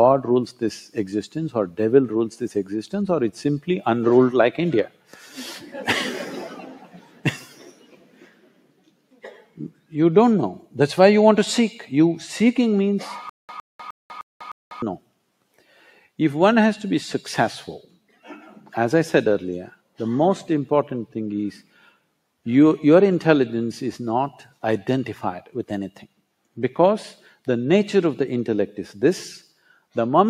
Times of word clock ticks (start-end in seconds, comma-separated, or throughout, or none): none